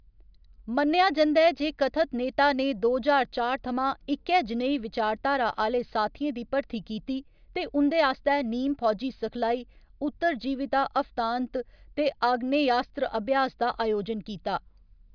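No technical faults occur at any point in the recording, so there is nothing to describe in time order.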